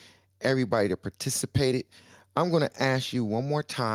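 Across the recording the speech signal shows no audible technical faults, with nothing interrupting or degrading it at any point.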